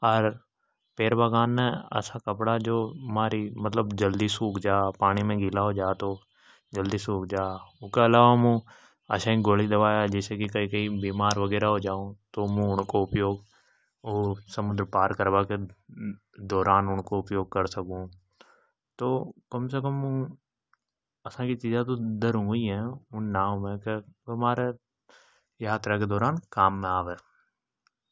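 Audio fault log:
No faults heard.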